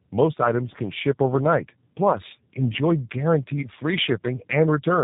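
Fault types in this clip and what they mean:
tandem speech coding: The speech passed through a low-rate speech coder twice, consistent with G.729A, with a telephone-grade link between, so the second pass re-encoded the first pass's errors. It sounds rough, muffled and warbly, with nothing above 3.8 kHz.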